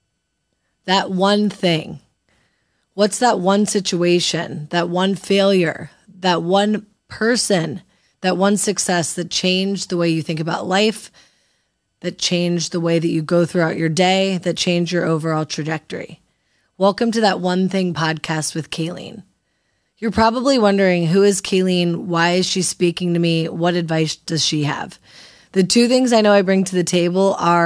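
No technical faults can be heard anywhere in the speech. Nothing in the sound changes or stands out from beginning to end.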